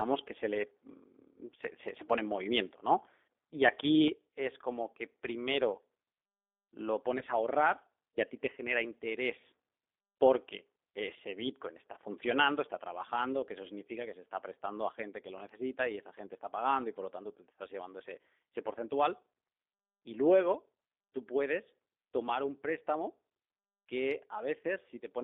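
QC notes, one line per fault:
throughout, G.729 codec: The band runs only from about 300 Hz to 3.6 kHz, and the speech has a plainly rough, synthetic quality. This points to an 8 kbit/s G.729-type coder, which rebuilds each 10 ms frame from a vocal tract filter, pitch prediction and a few pulses.
3.93 to 3.96 s, microphone overload: For about 30 ms the loudest peaks flatten at the converter's limit, and a small share of samples is clipped, giving a brief harsh crackle on that syllable. The likely cause is input gain set too high, driving the converter to its limit.
4.08 s, microphone volume stepped down: Speech and background drop together by about 7 dB in a single step, just after the distorted peak. The likely cause is the call software detecting the overload and cutting the device's input volume at once.
7.19 to 7.23 s, VoIP packet loss concealed by the speech codec: About 20 ms of audio is missing, which fits two lost 10 ms frames. 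The decoder fills the gap by extending the previous pitch and filter at falling gain, producing a short fading smear, and speech stays weak for a few frames after it.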